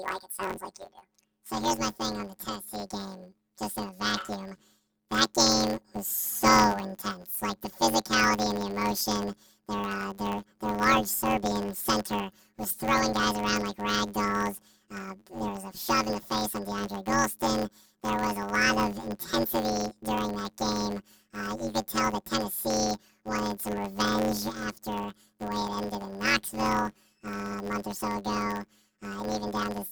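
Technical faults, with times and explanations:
Throughout, planar audio read as interleaved: each 10.67 ms block plays its left and right halves at double speed, giving a robotic buzz at 93.8 Hz that fits 512-sample blocks.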